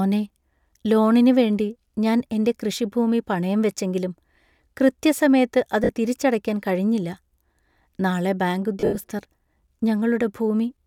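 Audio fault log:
5.84 s and 8.80–8.97 s, lost LE Audio frames: a 50 ms gap just before "തിരിച്ചടയ്ക്കാൻ കഴിഞ്ഞില്ല", then 120 ms of losses scattered over 160 ms just after "നാളെ ബാങ്ക്", the longest run about 70 ms. The LC3 decoder refills each gap by reusing the last spectrum with random signs, so voiced sound becomes a brief noisy smear rather than a hard silence or a buzzy waveform repeat. The gaps fit 10 ms frames, and the light codec coloring around them is not part of the fault.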